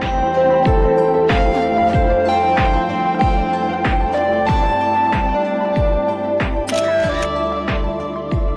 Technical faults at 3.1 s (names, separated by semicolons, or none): none